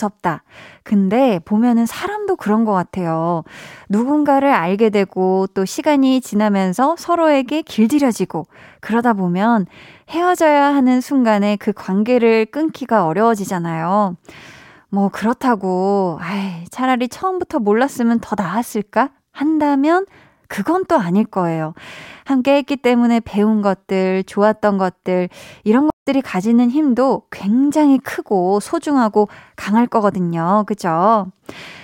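At about 25.90 s there's a stream reconnect: the connection dropped, roughly 143 ms of silence follows, and a fresh decoder picks up mid-stream at 26.07 s. The speech resumes about 150 ms further along, so a small piece is simply skipped.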